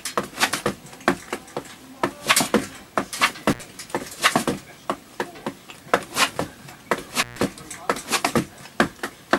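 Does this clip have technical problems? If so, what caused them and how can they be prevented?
Yes. An intermittent contact, a loose cable or plug, briefly broke the signal path twice: at 3.51 to 3.60 s, open for about 70 ms, and at 7.20 to 7.39 s, open for about 135 ms. Each time the sound drops out to faint hiss, with crackle as the connection breaks and remakes. To prevent it, reseat or replace worn cables and connectors, and secure them so they cannot move during recording.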